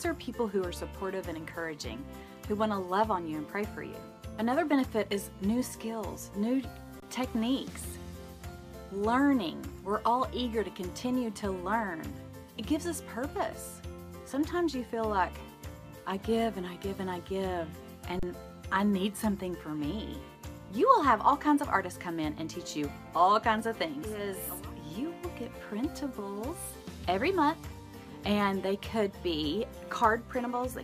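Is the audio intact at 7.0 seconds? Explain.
No. An underrun with held sample runs from 7.00 to 7.02 s: the converter freezes at its last value for about 23 ms (1024 samples), so the sound stops with little or no click. Unlike a dropout to zero, it stays flat, then resumes, having lost about 20 ms.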